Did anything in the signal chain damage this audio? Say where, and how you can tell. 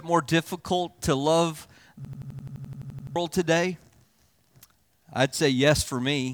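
Yes. A system hang loop hit the driver or buffer stage from 2.05 to 3.16 s. One 85 ms slice repeats 13 times, a machine-gun stutter at 11.7 Hz. The system froze while the hardware replayed its ring buffer, which fits 4096 samples. About a second is lost.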